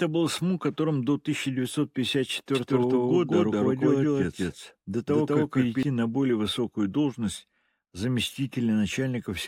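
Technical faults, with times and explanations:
2.55 to 5.83 s, doubled audio track: an equally loud, dry copy trails about a fifth of a second behind, starting and stopping abruptly, likely from a second capture path.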